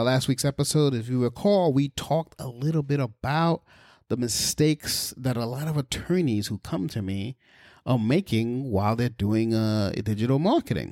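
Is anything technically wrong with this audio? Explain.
No, nothing technically wrong turns up anywhere in this speech recording.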